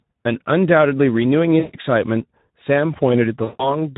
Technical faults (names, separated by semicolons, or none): Speex codec; VoIP packet loss concealed by the speech codec